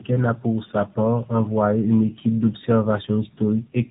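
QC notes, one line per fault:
Throughout, tandem speech coding: the speech went through two low-rate mobile-style coders in a row, likely AMR-NB, with a plain telephone leg between them, so each stage recoded the last one's damage. That stacks up as rough, muffled, warbly speech with nothing above 3.8 kHz.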